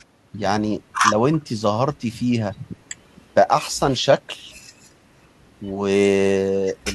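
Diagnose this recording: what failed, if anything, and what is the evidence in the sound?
Nothing failed: no stage of the chain, from capture to playback, leaves any audible evidence of a fault in this speech recording.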